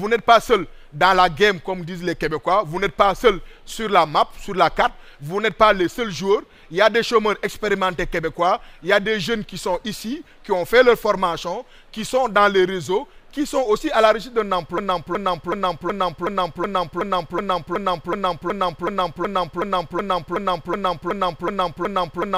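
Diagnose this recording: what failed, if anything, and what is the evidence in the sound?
A broken-record loop runs from 14.78 s to the end: a 0.37 s fragment repeats exactly, back to back, about twenty times. This likely points to a stalled player or stream buffer re-sending its last fragment, so the audio that belonged there is lost.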